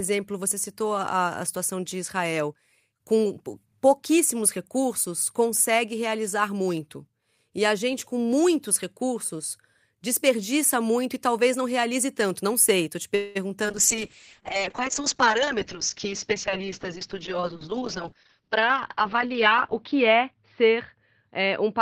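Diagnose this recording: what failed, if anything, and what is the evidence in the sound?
Right after "sei estou te", at 13.15 s, the speech stalls for about 0.2 s, until 13.37 s. The last sound carries on as a fading buzz or hiss, then the talk resumes exactly where it stopped. Nothing is lost, but everything after it arrives about 0.2 s later. That's most likely a call audio freeze at the network and jitter-buffer stage. Packets were held up, the buffer ran dry, and the receiver stretched the last sound until they showed up.

A moment later, from 13.63 to 13.66 s, there's a quick smear, a short concealed packet loss. Roughly 20 ms of audio never reached the decoder in time, so the receiver papered over the gap. It extended the preceding sound, using its pitch if voiced or shaped noise if not, and crossfaded back into the real signal. Brief, but audible as a little wobble in the speech.

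Then at 13.70 s the call bitrate drop kicks in and lasts to the end of the clip. The codec stage goes from 32 kbps down to 6 kbps, and it sits at the bottom for about 5.5 s. The audio turns rough and watery, and it's muffled because the bandwidth collapses from 20 kHz to 6 kHz. That's the bandwidth estimate falling and the encoder being told to spend far fewer bits.

Between 15.54 and 19.33 s the speech runs about 5% fast at unchanged pitch, so it sounds slightly hurried. That's a jitter buffer speed-up on the receiving side. After the earlier stall, the buffer was holding more audio than its target. To claw back the extra delay, it trimmed many short pitch-period-sized slices in a row, about a fifth of a second in total.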